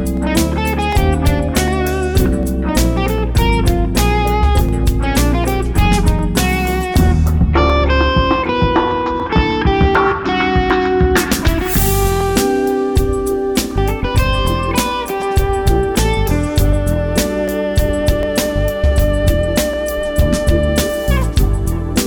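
Clock drift buffer slips run from 0.17 s to 21.99 s as a regular click every 0.75 s, about thirty in all. The likely cause is two devices on clocks about 500 ppm apart, so a buffer drifts until roughly fifteen samples are dropped or repeated.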